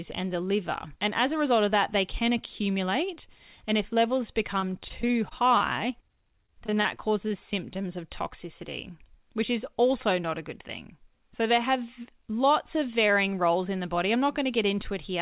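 From 4.6 to 5.62 s after "if levels", and 6.46 to 7.32 s before "symptoms of toxicity which", repeated packet loss (robotic sound) leaves seven gaps each, up to 24 ms, patched by repeating sound. It sounds choppy. The waveform shows copied cycles, and the spectrogram shows smeared stripes below its 4 kHz ceiling.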